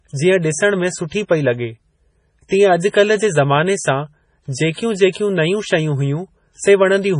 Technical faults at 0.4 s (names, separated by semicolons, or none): MP3 compression